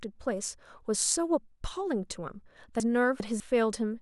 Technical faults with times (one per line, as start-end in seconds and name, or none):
2.80-3.40 chunks out of order